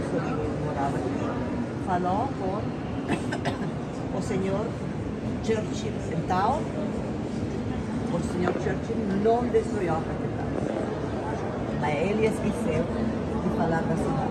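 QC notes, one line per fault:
No faults heard anywhere in the clip.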